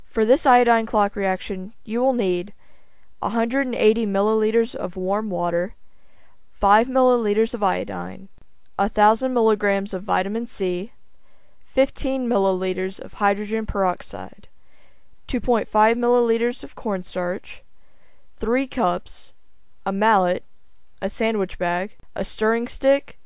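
No technical faults can be heard anywhere in the recording.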